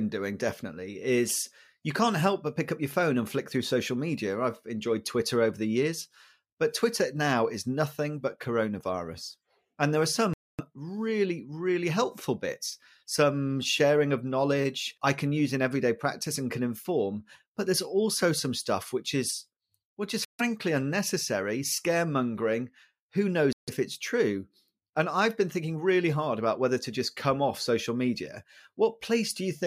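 Bluetooth stalls at 10.34 s, 20.25 s and 23.53 s cut the speech to silence for about 0.25 s, 0.14 s and 0.15 s, after "there are", after "which is which is", and just before "it's true". Each gap is likely a starved headphone buffer: interference delayed packets, playback halted until retransmissions arrived, then the speech resumed, as with "really really helpful bits" and "unnecessary scaremongering".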